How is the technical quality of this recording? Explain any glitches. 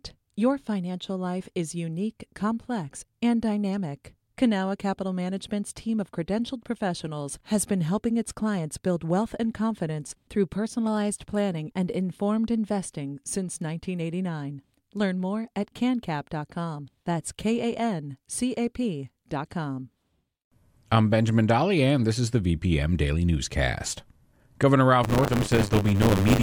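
The recording has one glitch, right at the end. From 25.03 s to 26.42 s the speech takes on a robotic rattle buzzing at 100 Hz. This is buffer tearing. The writing program and the playback hardware have slipped out of step, so within every 10 ms period a small slice holds audio from about 30 ms earlier, spliced in with hard joins on both sides.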